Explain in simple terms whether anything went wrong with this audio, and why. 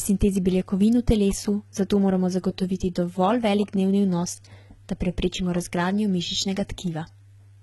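Yes, something went wrong, and it lasts the whole clip rather than happening at one moment. The speech has a metallic edge, and the s sounds come out gritty or lispy instead of crisp. Nothing at all is present above about 11.8 kHz. This is likely HE-AAC compression applied heavily: the codec keeps only the lower frequencies properly and fakes the treble by copying lower bands upward, so the top end is there but no longer matches the real voice.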